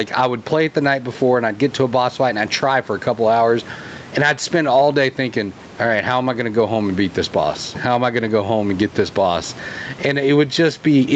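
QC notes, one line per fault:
Throughout, gain pumping: the level ducks by around 10 dB whenever the speech gets loud, so everything sounds squashed together. Likely the mic gain is far too hot, with a fast limiter clamping each loud burst.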